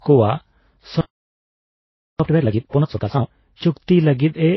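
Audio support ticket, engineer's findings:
Transcoding between lossy codecs, throughout. Speech band ends near 5.8 kHz; artefacts of two different codecs overlaid. Likely a low-bitrate MP3 stage re-encoded to Vorbis, the second encoder spending bits on the first's damage while keeping its cut-off.

Playback stall, 1.01 to 2.20 s. Output drops to silence mid-phrase for about 1.2 s, then speech resumes. Likely the player's buffer ran dry or its audio thread blocked, starving the output until data returned.

Time-compressed catch-up, 2.20 to 3.38 s. Speech runs at 2x speed with unchanged pitch. The player trims backlog after the stall, excising short segments and cross-fading the joins to regain real-time position.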